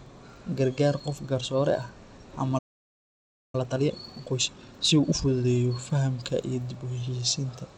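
A speech recording carries the sound of Bluetooth SBC compression from start to finish, and the damage is plainly audible. The upper treble thins out and flickers in and out as the top sub-bands are starved of bits, while the remaining bands are quantised coarsely enough to leave a gritty grain with aliasing on the voice. That degree of loss points to a low bit allocation, in the region of 96 kbps, though the encoder setting itself is inferred from the sound, so this is the likely cause rather than a certainty. At 2.58 s the audio cuts out completely in mid-flow and stays silent for about 0.95 s, resuming at 3.55 s. This is a playback stall: the output buffer likely ran dry or the audio thread was held up, so nothing reached the output until it recovered. When the sound returns at 3.55 s it plays hurried, at 1.5 times normal speed, until 5.45 s. Pitch stays where it should be. This is time-compressed catch-up. 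The player is clearing the backlog left by the stall by cutting out short segments and cross-fading across the joins, which keeps the pitch steady while squeezing the timing.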